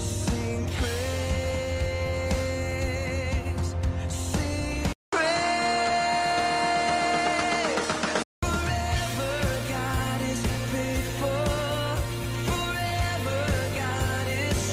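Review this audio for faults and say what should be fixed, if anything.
The recording input was likely switched to a poorer device between 4.93 and 8.43 s, and then switched back. A short silence of about 200 ms marks the change. During that stretch nothing above 10.5 kHz gets through, so the sound turns duller and boxier, and a new noise floor appears roughly 50 dB below the signal, while the level stays about the same. To prevent it, lock the capture device and disable automatic switching during recording.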